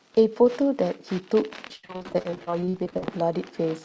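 From 1.68 s to 3.04 s, repeated packet loss (robotic sound) sets in. Packets keep going missing, and each hole, the longest 76 ms, is patched by extending the previous sound. With around 40% of the stretch concealed, the speech turns choppy and robotic.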